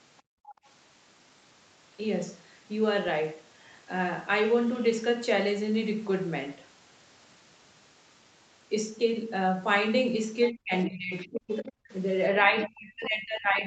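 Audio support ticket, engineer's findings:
Background gated by the echo canceller, 0.22–0.65 s. Room tone dips hard, down about 34 dB at its deepest, roughly 0.4 s affected in total. Echo canceller clamped the mic while far-end audio played on the loudspeaker, then released.

Other side's voice leaking through, 10.43–10.51 s, 11.18–11.27 s, 11.56–11.71 s. Faint second voice in short scraps, about 20 dB below the talker, the last near 15 dB below. Likely residual loudspeaker echo the canceller failed to remove from the mic pickup.

Speech suppressed in double talk, 10.5–11.9 s and 12.36 s to end. Talker's level drops in pieces, around 40 dB at worst and about a second affected in the first stretch, around 30 dB in the second. Likely both ends talking at once, so the canceller ducked near-end along with the echo.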